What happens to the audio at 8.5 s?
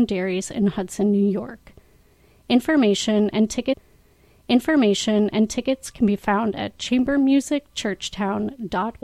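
Nothing goes wrong at 8.5 s; the audio plays through that moment intact, with no dropout, click or distortion to be heard.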